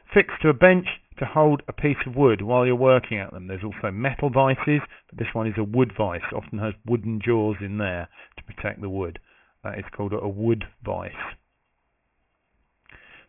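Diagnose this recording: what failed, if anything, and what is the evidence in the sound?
Throughout the recording, high-frequency content sounds gritty and metallic, with spurious tones at pitches unrelated to the material, audible not far below the wanted signal. The spectrum runs hard up to an edge near 3 kHz. This is aliasing at the sample-rate conversion stage. The audio was reduced to what fits a 6 kHz rate without an anti-alias filter, so everything above 3 kHz folded back down into the band as false frequencies.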